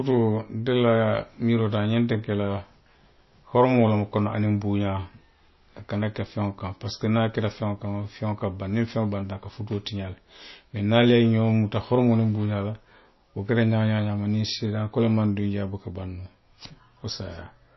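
It's a speech recording, and the whole thing has a hard ceiling, with nothing above 5.8 kHz. The coding damage is plainly audible from start to finish: a watery, swirly quality where weak detail flickers in and out, and smeared edges on the consonants. That's likely MP3 compression starved of bits, which fits a bitrate somewhere around 25 kbps. The encoder chops the treble at a fixed point and drops quiet frequency content frame by frame.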